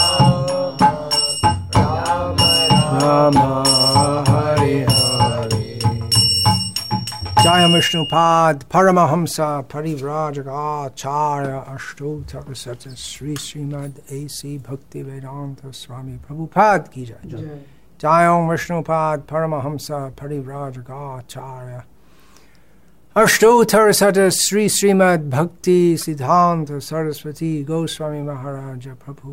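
A broken MP3 bit reservoir at 26.01 to 26.03 s makes the sound skip briefly, likely because dropped frames left the next one reading another frame's bytes, which fits 24 ms frames.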